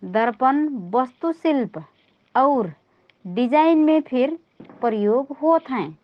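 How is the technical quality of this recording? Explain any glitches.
No glitches can be heard anywhere in this recording.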